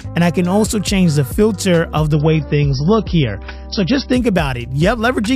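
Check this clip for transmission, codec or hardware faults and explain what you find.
There's one fault here: from 2.13 to 4.13 s the adaptive stream switches to a lower bitrate. With the connection slowing, playback jumps to a leaner MP3, which fits a drop from around 128 to roughly 24 kbit/s. Everything above 5.8 kHz vanishes, artefacts thicken, and the switch is abrupt with no gap.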